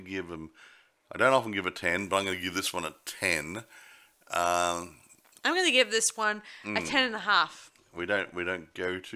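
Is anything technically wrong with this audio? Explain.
Yes. From 1.99 to 6.24 s, pre-emphasis is left on: the FM 75 µs treble boost never got its de-emphasis, so 10 kHz sits about 13 dB hot, making the speech thin, bright and hissy.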